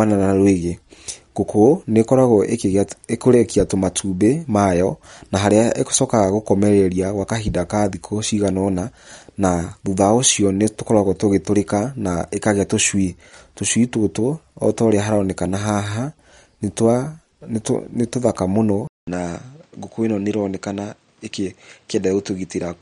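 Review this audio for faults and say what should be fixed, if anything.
Throughout the recording the speech has plainly audible MP3 compression, likely from a low-bitrate encode around 48 kbps. Starved of bits, the encoder drops weak frequency lines frame by frame, giving a watery, swirly texture, and nothing remains above 11.1 kHz. Encode at a higher bitrate or keep a lossless master.

At 18.87 s the input switched to a poorer device, likely a headset call profile or another microphone. About 200 ms of silence marks the change, and from there to the end the band stops at 8.8 kHz. The level drops by roughly 5 dB, and new background noise sits around 40 dB below the speech. Lock the input device in the system settings before recording.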